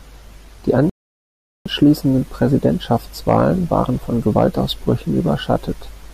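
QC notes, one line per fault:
0.90–1.66 s, rebuffering stall: the speech halts into dead silence for about 0.76 s as playback runs out of buffered audio, then picks up exactly where it stopped. Unlike a dropout, no speech is missing; the pause only stretches the timeline.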